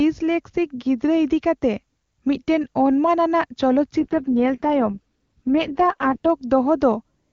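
From 4.00 s to 6.29 s the speech turns rough, raspy and synthetic, then recovers. This is an AMR rate drop. The link weakened, so the network told the wideband AMR codec to spend fewer bits on the speech and more on error protection. The roughness fits a fall from the top rate of 23.85 kbit/s to the lowest, 6.6 kbit/s. The bandwidth stays the same. There is no gap or dropout.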